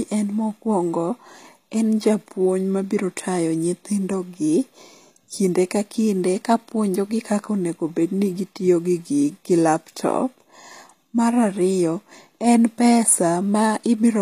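From start to finish the speech has gritty, lispy sibilants and nothing above 14.9 kHz, likely HE-AAC compression at a low bitrate around 24 kbps rebuilding the treble.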